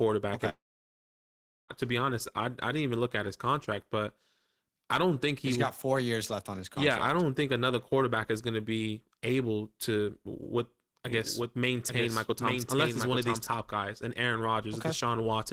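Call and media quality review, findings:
Long network dropout, 0.49–1.71 s: about 1.2 s of speech missing, a brief fading buzz, then roughly 1.1 s of silence; resumes at "to be honest I". Likely packet loss. Unlike a mute, there is a decaying concealment tail first.

Doubled audio track, 11.10–13.54 s, after "able to what I" until "guys an": full-band second copy about one second behind, about 5 dB quieter, with abrupt start and stop. Likely a slower duplicate capture path. Unlike echo, there is no decay or room colour.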